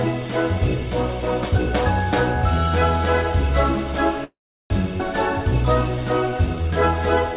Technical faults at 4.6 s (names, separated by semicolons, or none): call audio freeze